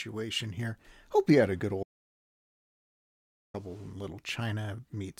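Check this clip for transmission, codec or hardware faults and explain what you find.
One fault: an audio dropout to silence from 1.83 to 3.54 s, likely a lost input with silence written. About 1.71 s of speech vanishes into silence, without room tone, unlike a noise gate.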